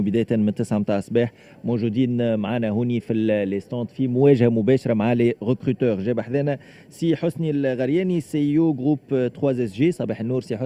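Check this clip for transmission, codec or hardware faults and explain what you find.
No faults detected.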